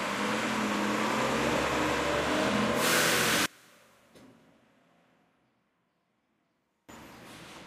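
One channel inverted, from 3.46 to 6.89 s: the sound drops by about 30 dB, collapsing to a faint remnant before returning at full strength. The likely cause is one stereo channel carrying reversed polarity, so when the two channels are summed to mono, everything they share cancels out. What survives is only the small difference between left and right, which here leaves a weakened trace of the original sound.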